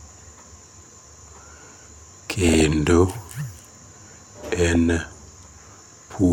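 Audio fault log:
2.44–2.68 s and 4.60–4.75 s, DAB burbling: noisy blips and sub-band level jumps over the speech, as bit errors at a fraction of a percent corrupt MP2 sub-band samples and scale factors frame by frame.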